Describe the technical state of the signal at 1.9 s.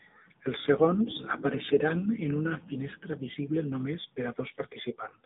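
The speech passes through an AMR narrowband mobile codec, confined to 250 Hz to 3.7 kHz. Its plainly audible buzzy, synthetic tone fits a low rate near 7.4 kbps.

From 1.90 to 1.97 s, AMR bit errors strike a few frames. Flipped bits misplace the excitation pulses. The voice holds its pitch and level but turns hoarse and gargly.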